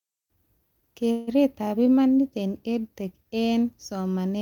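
A call audio freeze runs from 1.11 to 1.29 s, just before "imanit eng". The last sound is held as a fading fill for 160 ms, then speech resumes intact but later. Delayed packets emptying the jitter buffer are the likely cause.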